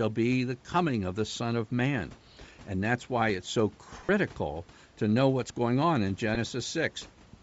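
A grainy, breathy edge sits on the speech throughout, with the upper frequencies sounding hollow and hissy rather than clean. This is plainly audible codec damage, most likely from Bluetooth LC3 compression at a low rate around 32 kbps with 10 ms frames. At that rate the encoder discards much of the upper spectrum and fills the gaps with noise, which produces the fizzy texture. Room noise sits about 26 dB below the speech. Twice the sound briefly turns into a noisy smear. The first smear runs from 4.05 to 4.10 s, just after "that's why it's so". The second, shorter one runs from 6.35 to 6.37 s, after "what's going on in". These are lost LE Audio frames. The first gap lasts about 40 ms, which fits four consecutive 10 ms frames going missing. The second fits a single dropped frame. To cover each gap, the decoder repeated the last good spectrum with scrambled phase, so the sound blurs into a brief noisy wash instead of going silent.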